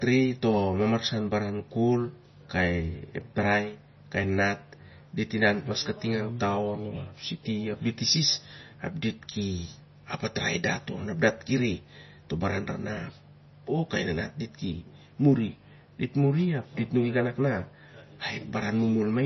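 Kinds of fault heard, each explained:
MP3 compression: The speech has nothing above about 5.9 kHz, a hard treble ceiling of the kind an encoder sets when bits run short, and the heavy damage fits a low bitrate around 24 kbps. Weak frequency components drop in and out between frames, giving a watery, swirling texture. S sounds turn metallic and chirpy, and consonant onsets smear rather than landing cleanly. This pattern points to likely MP3 encoding, present for the full clip.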